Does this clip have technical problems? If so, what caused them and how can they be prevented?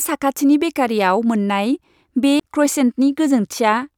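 Yes. A CD skip at 2.40 s: a knock or a disc flaw threw the laser onto a different turn of the spiral, so the speech cuts out for roughly 15 ms and resumes from another point. Cleaning discs and isolating the player from vibration prevents it.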